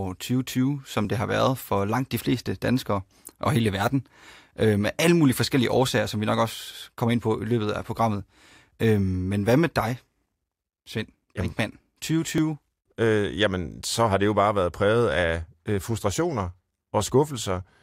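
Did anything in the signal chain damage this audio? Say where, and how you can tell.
Yes. At 12.38 s there is a small jump in the sound, likely a dropped buffer (overrun) at the driver stage, losing roughly a millisecond or two.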